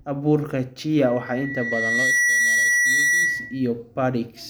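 A speech recording with loudspeaker feedback squeal. At 1.04 s a steady tone near 2 kHz appears and swells over roughly a second. It settles at about 5 dB above the speech and holds until 3.71 s, then stops. The microphone is hearing the loudspeaker it feeds. At that one frequency the loop gain tops one, so the tone keeps feeding itself. It ends only when the loop is broken.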